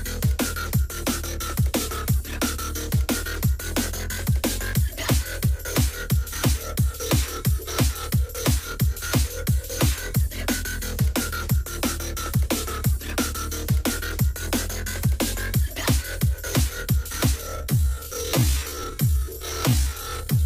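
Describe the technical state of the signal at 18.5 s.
At 18.5 s the signal sits inside a time-stretched section running from 17.39 s to the end at 20.46 s. The audio there plays at roughly half speed (0.52×) with its pitch unchanged, which likely comes from software repeating short pieces to fill more time. It drags. On a spectrogram, partials keep their frequencies but stretch horizontally with repeated blurs, and the waveform shows lengthened, duplicated cycles.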